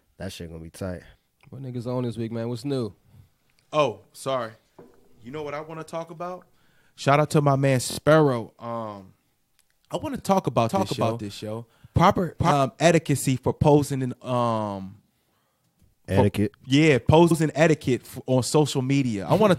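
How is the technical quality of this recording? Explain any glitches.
The recording has audible glitches: repeated frames in three places and one doubled audio track.

Repeated frames: After "out to my man", at 7.90 to 7.97 s, one 23 ms frame plays three extra times. At 10.17 s, between "I want to" and "to talk", one frame replays once. At 17.30 to 17.37 s, a 70 ms block replays once. Each replay is a short stutter, and the clip gets slightly longer. The 23 ms frame size fits 1024-sample frames at 44.1 kHz.

Doubled audio track: From 10.69 to 12.51 s, after "I want to talk" and up to "etiquette for posing", a second copy of the speech plays. It is about 5 dB quieter and trails by roughly 0.4 s. It starts and stops abruptly and sounds like a dry echo. It was likely caused by a second, slower capture path or an edit holding two misaligned copies.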